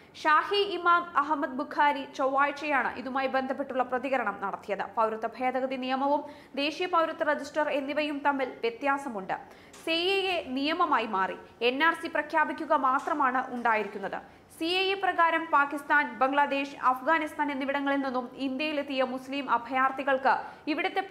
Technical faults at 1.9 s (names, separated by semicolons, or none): none